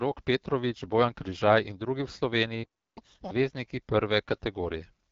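A speech recording carried through the AMR wideband (HD Voice) codec at 8.85 kbit/s, the second-lowest rate, and the coding damage is plainly audible. The vocal tract model and its pulse excitation get too few bits, so the voice takes on a rough, raspy edge. Detail is coded only up to 6.4 kHz, with shaped noise standing in above that, and nothing at all sits above 7.6 kHz, which leaves the top end dull and synthetic. At 2.63 s there is a playback stall: the sound cuts out mid-flow and stays silent until 2.98 s, a gap of about 330 ms. The likely cause is the player running out of buffered data or its output thread being blocked, so nothing could be written to the device until it recovered. From 2.98 s to 3.31 s the clip shows catch-up at higher speed: the player resamples its accumulated backlog to run at 2.0x, so the speech rushes and jumps up in pitch by roughly ten semitones. This wins back about all the lost time before returning to normal speed and pitch.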